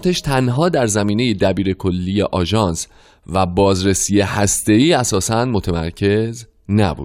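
Nothing in the speech recording stands out as a technical fault: the signal level, continuity and frequency content stay steady across the whole clip without any audible disturbance.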